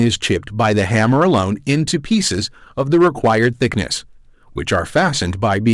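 Hard clipping runs through the whole speech clip. The signal is driven about 6 dB past what the stage can pass, so peaks are cut flat. Only a small share of samples, under two percent, hit the limit. That gives brief crackle on loud syllables.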